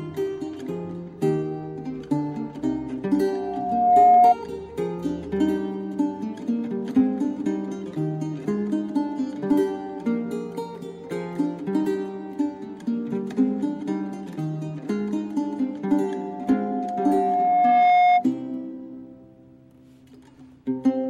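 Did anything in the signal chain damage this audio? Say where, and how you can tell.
Yes. Loudspeaker feedback squeal at 3.33–4.35 s and 16.03–18.26 s: a steady 717 Hz tone swells over the sound, within about a second, then over about two seconds. In the acoustic loop, the microphone re-amplifies its own loudspeaker; at 717 Hz loop gain exceeds one, so that tone builds itself.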